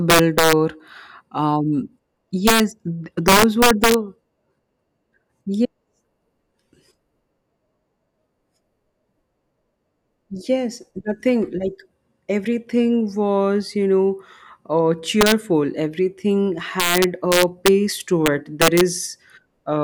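Integer overflow strikes the speech at 0.10–0.53 s, 2.47–2.60 s, 3.28–3.94 s, 15.21–15.32 s, 16.80–17.68 s and 18.26–18.81 s, with peaks driven about 2 to 5 dB past full scale. Instead of being held at the limit, each excess peak wraps to the opposite extreme, producing violent cracks harsher than clipping. On a waveform, peaks jump abruptly from top rail to bottom; a spectrogram shows sharp broadband vertical streaks.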